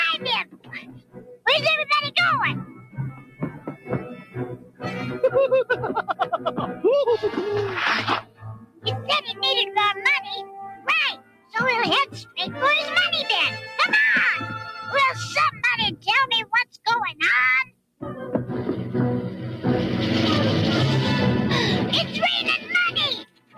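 Throughout, a speech-tuned noise suppressor applied to music or sounds treats sustained material and ambience as noise. Gain swings around 15 dB, so the waveform envelope pumps. On a spectrogram, held energy and decays thin out while transient onsets mostly come through.

Sound cut by the noise suppressor occurs at 0.44–1.46, 2.64–7.3, 8.2–9.42, 10.43–12.37, 15.51–16.87, 17.64–18.02 and 22.58 s to the end. Each drop reaches about 19 dB, or about 18 dB at 10.43 s. Sustains sink and tails stop short, appearing as dark gaps after onsets.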